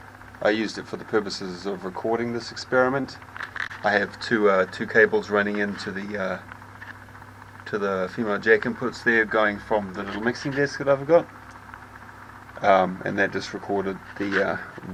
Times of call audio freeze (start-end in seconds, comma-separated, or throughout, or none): none